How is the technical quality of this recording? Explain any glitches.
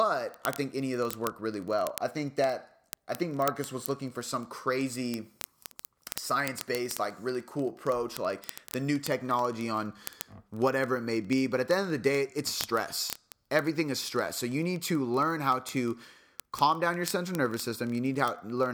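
The recording carries a continuous clocking fault: word clock ticks run from 0.12 s to the end of the clip. A digital link was being received by a device on its own free-running clock. The two clocks differed by around 700 ppm, so they slipped past each other about every 30 ms. At each slip a single sample was dropped or repeated. The result is a steady train of several hundred sharp ticks laid over the speech for its whole length.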